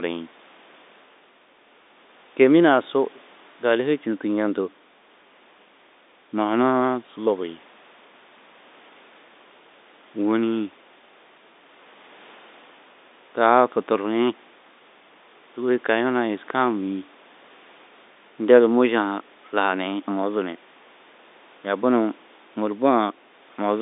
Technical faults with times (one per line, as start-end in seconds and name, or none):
none